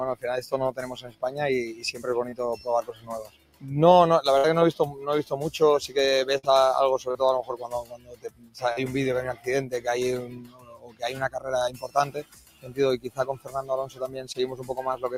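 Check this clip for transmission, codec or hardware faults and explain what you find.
The clip has three problems: a speech-oriented noise suppressor running on non-speech audio, repeated dips where that suppressor cuts the sound, and packet loss in short and longer bursts.

A noise suppressor applied to music or sounds is active for the whole clip. A processor built for speech is treating steady, non-speech material as noise. Its gain swings by around 15 dB, so transients pass while sustained content and decays are pulled down. The result is audible pumping and a thinned, unstable level throughout.

Sound cut by the noise suppressor appears at 0.99–2.03 s (about 16 dB deepest), 2.56–3.69 s (about 16 dB), 4.92–5.31 s (about 9 dB), 7.64–8.58 s (about 17 dB), and from 10.28 s to the end (about 16 dB). In each span the suppressor classifies held or fading sound as noise and attenuates it. 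The audible effect runs for roughly 0.4 s and 0.7 s in the first two spans and a fraction of that at 4.92 s. Level sinks and tails are cut short, while onsets stay relatively intact.

Short concealed packet loss occurs at 2.29–2.34 s, 7.11–7.17 s, 8.73–8.79 s and 14.33–14.36 s. Audio that did not arrive in time was replaced by extrapolating the preceding signal, either as a pitch continuation or as shaped noise, and then crossfaded back into the real audio. The missing chunks are about 20–40 ms, which fits one or two 20 ms packets. Each is heard as a brief smear or wobble, and a short transient can disappear.

A burst of packet loss hits at 4.38–4.46 s and 6.38–6.45 s. About 60 ms is missing each time, consistent with three consecutive 20 ms packets. The concealment held the last sound for roughly 55–60 ms while fading it, producing a short sustained buzz or decaying hiss. Playback then resumes with that stretch of audio gone.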